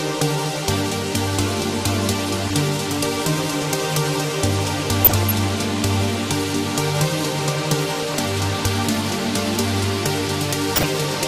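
MP2 compression runs throughout. The sound is dull and carries a granular, gurgling distortion as upper sub-bands switch off and the remaining bands are coarsely quantised. The plainly audible damage fits MPEG Layer II at around 80 kbps, the likely cause.

DAB burbling breaks in at 2.48–2.58 s, 5.00–5.31 s, 7.83–8.18 s and 10.67–11.06 s. Bit errors at a few tenths of a percent slip past error correction, so single sub-bands get short blips of noise or jump in level for up to a frame, giving a burbling sound.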